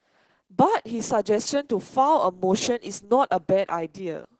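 From start to finish the speech carries Opus voice compression, and it's heavy. The top end stops at about 8 kHz, so sibilants lose their sparkle, and the voice comes across hoarse, a bit muffled and faintly robotic. That's the linear-prediction coder being starved: it models the vocal tract fine but codes the excitation so coarsely that the natural buzz turns grainy. The damage level fits a bitrate of around 10 kbps in SILK mode.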